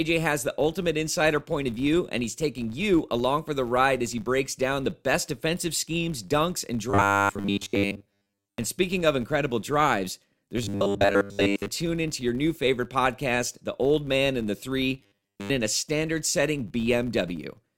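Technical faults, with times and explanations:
Throughout: filter restarted on every block. A filter in the chain loses its memory at each block boundary and begins again from silence, so every block opens with a small click. These clicks repeat at 100 Hz, which points to blocks 10 ms long. Together they form a steady buzz under the speech. The buzz grows louder when the speech is loud and fades in quiet passages, because each tick scales with the signal level.
6.90 to 8.58 s, 10.64 to 11.70 s, and 15.01 to 15.50 s: robotic sound from repeated short buffers. In these stretches the speech turns metallic and rigid. It buzzes at a fixed 100 Hz but still roughly tracks the speech. The likely cause is new audio arriving too slowly. A 10 ms fragment is then replayed to fill the gaps, and about seven tenths of the real audio is skipped. That repetition imposes its own pitch.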